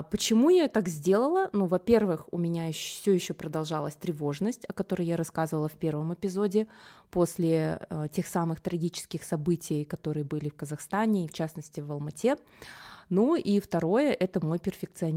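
At 13.21 to 13.23 s, right before "и второе", there's a lost packet rebuilt from error correction. The stretch sounds like a single packet went missing, about 20 ms, but the next packet carried a low-bitrate backup copy and the decoder played that instead. So nothing drops out. You just get a brief patch where the speech turns rougher and a bit noisier, since that stand-in copy holds far less detail than the original.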